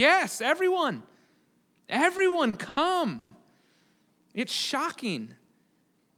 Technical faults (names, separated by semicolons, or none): repeated stalls (stutter); call audio freeze